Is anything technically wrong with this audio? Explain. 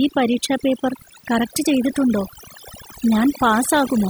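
Yes. Throughout the speech there is overdone noise removal: a noise reducer set too aggressively. It pulls individual frequency bands down or shuts them off whenever they sit close to its noise estimate, so the background drops and breaks up into twinkling specks, and softer parts of the voice are stripped away. Unlike a noise gate, which mutes everything at once, this works band by band, causing the scattered, chirpy residue.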